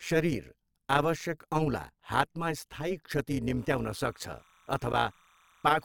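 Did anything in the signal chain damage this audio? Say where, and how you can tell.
Yes. Throughout, an overlap-add ripple in frame-based processing puts a metallic buzz of about 11 dB on the speech at about 150 Hz. Unlike slow gain pumping, it holds steady at the frame rate.

From 3.57 s to the end, timecode bleed in the analogue wiring adds a chirping warble about 35 dB below the speech. It alternates near 1 and 2 kHz, which fits 30-frame code and rules out mains hum.

At 4.93 s, a gap between stream segments during playback inserts about 10 ms of hard-edged silence. Unlike a dropout, the speech resumes intact, which fits a 6 s segment boundary.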